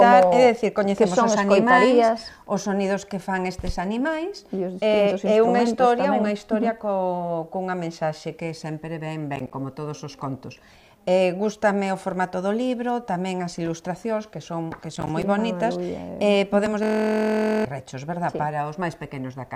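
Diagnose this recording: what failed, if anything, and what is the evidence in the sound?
Processor overload crackle, at the driver or buffer stage. From 9.36 to 9.54 s, and again from 14.96 to 15.23 s, the sound tears into gritty crackle. Each burst is a string of tiny hard-edged silent gaps. This fits a busy processor missing several buffer deadlines of about 10 ms in a row.

System hang loop, also at the driver or buffer stage. From 16.83 to 17.65 s, one 23.22 ms slice repeats dozens of times. It sounds like a steady buzz at 43.1 Hz. The system froze while the hardware replayed its ring buffer, which fits a 1024-sample buffer. Most of a second of real audio is gone.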